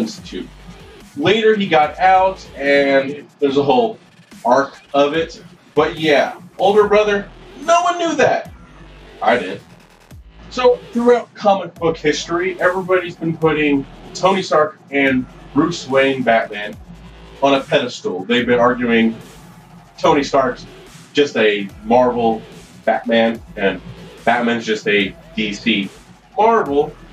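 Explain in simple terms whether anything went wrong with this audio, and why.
Listening through, nothing stood out as going wrong with this recording.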